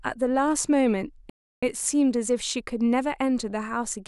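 At 1.30 s the player likely ran short of data or had its playback thread blocked, causing a playback stall: the speech cuts to silence in mid-flow for about 330 ms, until 1.63 s, then carries on.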